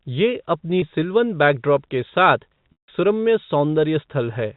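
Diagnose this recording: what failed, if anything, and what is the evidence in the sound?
The fault is at the network stage: packet loss with pitch repetition. At 0.80 to 0.82 s the speech briefly holds on a slightly buzzy, sustained tone. That is the receiver looping the last pitch period to cover a gap of about 20 ms. At 2.72 to 2.88 s the gap is 160 ms, so the repeated period fades to silence before the speech cross-fades back in. Both gaps fit lost 20 ms packets on the G.711 telephone coding path.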